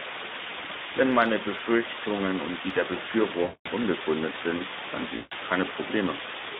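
Right from the start, the speech sits under a flat, even hiss that's about as loud as the speech itself. That's low bit depth with dither: the signal is rounded to very few levels, which fits a 4-bit word, and because dither was added first, the rounding error becomes steady white noise instead of gritty distortion. So you get constant hiss with no crunch riding on the voice.

Running alongside that is the Speex codec, and its damage is plainly audible throughout. The line is squeezed into a 200 Hz to 3.7 kHz band, so the voice sounds thin and boxy. This CELP codec gets too few bits for the excitation at what sounds like roughly 11 kbps, which leaves the speech hoarse and noisy.

At 3.43 s, just after "und die der", there's VoIP packet loss concealed by the speech codec, lasting to 3.70 s. That's about 220 ms of missing audio, which fits eleven 20 ms frames. The decoder fills the gap by extending its last pitch and filter, so you hear the sound stretched out and fading. 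The voice stays weak or distorted for a moment as "unbegründet sind dann" comes in.

It happens again at 5.15 s, shortly after "unbegründet sind dann", running to 5.35 s. This gap is about 160 ms, with the same stretched, fading sound where the speech should be.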